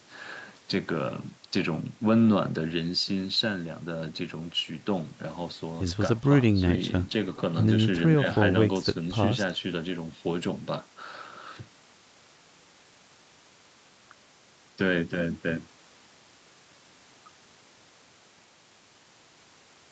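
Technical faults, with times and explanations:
No technical faults can be heard in this speech.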